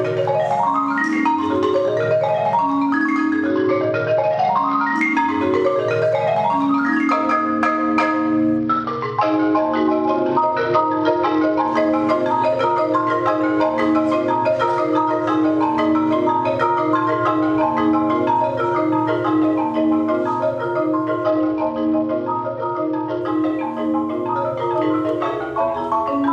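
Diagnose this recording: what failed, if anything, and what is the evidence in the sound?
Three stretches lose their treble and turn gritty, at 3.49 to 4.95 s, 8.57 to 11.67 s and 21.24 to 23.21 s, then recover cleanly. This is a Bluetooth SBC bit pool drop at the codec stage. Under link congestion the sender cut the bit allocation, which fits a fall from a bit pool of 31 to about 9, near 72 kbps. The upper sub-bands were starved of bits and the remaining bands were coarsely quantised.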